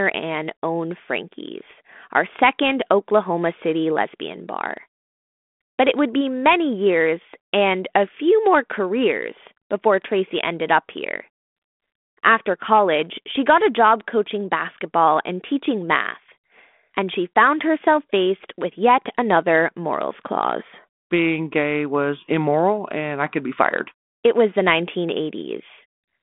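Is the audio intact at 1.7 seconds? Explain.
No. At 1.74 s, just before "our second", there are bit errors on an ADPCM link. Flipped bits at a very low error rate corrupt the adaptive step size and predictor of the 32 kbit/s G.726 stream, producing a brief pop and rough burst that rings for a few milliseconds.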